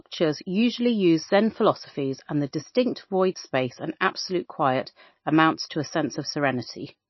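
From start to end the speech has plainly audible codec damage, likely MP3 compression at a very low bitrate, with the damage pointing to roughly 25 kbps. The encoder has cut the treble so that nothing remains above 5.8 kHz, and it drops weak frequency lines that flicker in and out between frames. S sounds turn watery and chirpy, and consonant onsets smear. A plain low-pass filter would dull the sound just as much but leave it steady rather than swirling.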